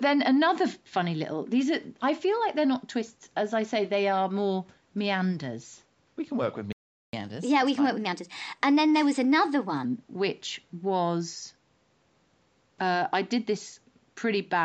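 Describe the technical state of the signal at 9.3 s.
At 9.3 s the player is in catch-up at higher speed, running from 7.13 to 9.85 s: after a stall it resamples its backlog at 1.15 times normal rate to regain lost time, so the speech runs faster and sits roughly two semitones higher until it settles back.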